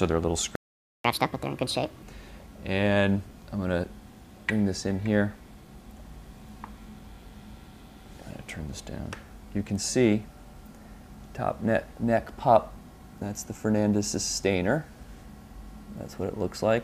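Just over half a second in, at 0.55 s, the audio simply drops out and stays silent until 1.04 s, a gap of about 490 ms. That's a playback stall, and it sounds like the player ran dry, likely because data stopped arriving in time or the playback thread got held up.

Right from 1.04 s the player tries to make up that lost half second with a catch-up at higher speed. It resamples the backlog to run at 1.5 times normal speed, so everything comes out faster and noticeably higher, raised by roughly seven semitones. The chipmunk effect lasts until 2.02 s, at which point the timing is back on schedule and speed and pitch settle back to normal.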